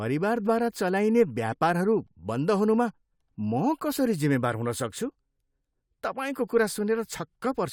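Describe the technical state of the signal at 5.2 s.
At 5.2 s the speech signal is intact, with no technical fault at that moment.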